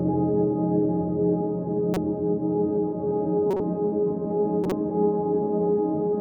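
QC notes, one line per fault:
1.94–2.05 s, 3.51–3.60 s, 4.64–4.72 s: corrupt frame decoded. Each time, a few damaged compressed frames played anyway, so misread gains and codes throw energy to the wrong frequencies, heard as a brief squeaky noise burst over the music, the later two louder. Dropouts or concealment would instead leave muted, smeared gaps.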